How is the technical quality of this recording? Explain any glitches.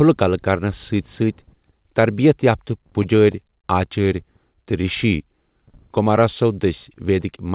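The recording has two timing glitches, both from packets arriving unevenly on a call link. The audio also stops at 4 kHz, which fits a narrowband G.711 mu-law path at 64 kbps.

From 2.87 to 3.67 s, right after "تربیت یافتہ", there are repeated stalls (stutter). Packets arrived late or too slowly, so the jitter buffer emptied six times. Each time, the receiver stretched the last sound to cover the gap, about 79 ms in all, with the longest gap 30 ms. That is roughly a tenth of the span. No speech is lost, but it judders and hesitates.

From 4.71 to 5.72 s, a jitter buffer slow-down occurs. The buffer was low or had just raised its target delay, so the receiver rebuilt its reserve by repeating single pitch periods and fragments of pauses, adding 80 ms. Speech plays at about 93% speed with unchanged pitch, so syllables sound slightly drawn out and sluggish.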